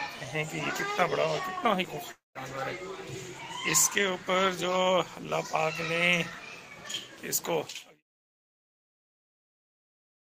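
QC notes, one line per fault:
2.11–2.38 s, long network dropout: the sound smears into a fading buzz, then 170 ms of silence, and resumes with a section missing, likely from packets lost in transit.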